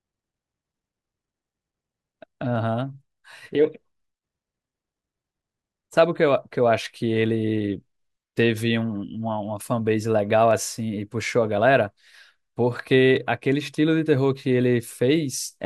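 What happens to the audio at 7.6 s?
Clock drift buffer slips fall around 7.6 s, part of a series running from 2.56 s to 13.17 s at a steady 2.65 s interval, about five in all. They are likely caused by two devices running on separate clocks, off by something like 70 parts per million, so the buffer between them gradually drifts until a handful of samples is dropped or repeated. Each slip is heard as a regular click in the speech.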